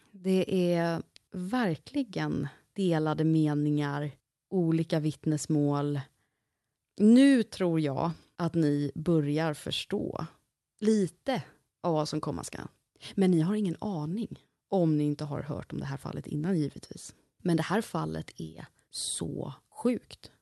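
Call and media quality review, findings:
Nothing to flag on this one: the speech comes across the call path carrying just the ordinary coding character of a typical call codec, and nothing in it needs a ticket.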